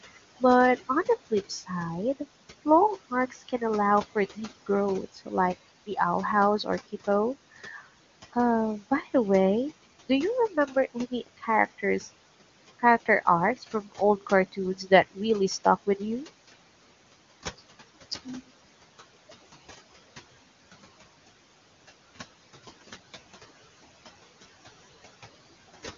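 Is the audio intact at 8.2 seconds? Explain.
No. 8.2 seconds falls inside a stretch of speech cut by the noise suppressor, running 7.65 to 8.36 s. The suppressor mistook some quiet speech for background and pulled it down by up to about 13 dB, so bits sound swallowed or faint. Altogether that's only about a sixth of a second. There are also noise suppressor artifacts here, as everywhere in the clip: the background is being lowered by about 16 dB, which can leave a fluttery residue and a thin, watery tone.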